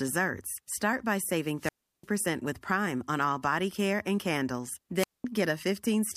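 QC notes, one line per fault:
1.58–2.07 s, wireless microphone squelch dropout: after "by saving", hiss rises as the radio link fades, then the receiver mutes for about 0.35 s; unlike a digital gap, static precedes the hole.
4.98–5.24 s, wireless microphone squelch dropout: after "body care and candles", brief static then a 0.21 s muted hole as squelch closes on the weakened FM signal, speech returning afterward.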